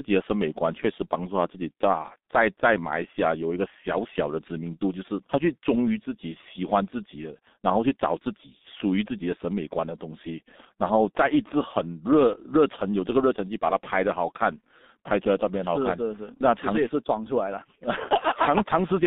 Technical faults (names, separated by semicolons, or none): G.723.1 codec